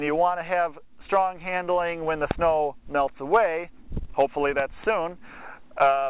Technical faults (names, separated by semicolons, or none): loud pop